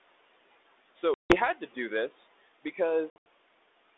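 Noise suppressor artifacts run through the whole speech clip. The suppressor judges frame by frame which frequency bands hold only steady room noise and pulls them down by about 18 dB. The background therefore drops away in the pauses and swells back up beneath the speech whenever it resumes, so the noise floor pumps in step with the talking instead of staying level.

Packet loss on an ADPCM call appears first from 1.14 to 1.38 s, where about 160 ms of audio, roughly seven packets, vanishes into a hard-edged silence. A second loss follows from 3.10 to 3.27 s, with 140 ms missing in scattered gaps across 160 ms, the longest single run 80 ms. In each case the decoder's adaptive predictor and step size lose step with the sender's. When the speech comes back, there is some distortion, which fades out over the next few tens of milliseconds on the 32 kbit/s G.726 link.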